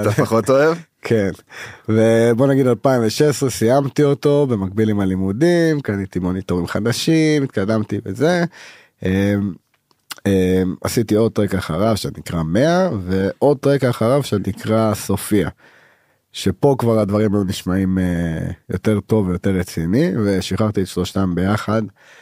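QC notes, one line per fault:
No faults found in this speech recording.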